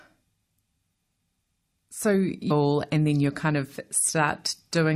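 A stream segment skipped at about 2.50 s: the speech jumps forward abruptly with a brief blip at the join, and the sound after the jump doesn't continue smoothly from what came before. The likely cause is that one piece of a segmented stream failed to arrive or load, so the player dropped it and carried straight on with the next piece, leaving a gap in the programme rather than a pause.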